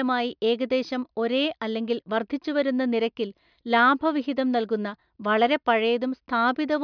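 No technical faults are audible.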